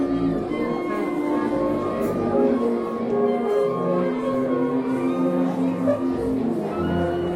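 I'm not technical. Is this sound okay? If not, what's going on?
No. At about 4.34 s there is a brief watery blip, a quick burst of noise where the sound should be clean. This is DAB burbling, a glitch from digital radio. When reception is weak, some of the data arrives damaged, and the error correction lets a small share of those mistakes through. The decoder then plays wrong values in a few narrow slices of the sound, which is what produces the blip. It looks like only a few frames of audio were affected.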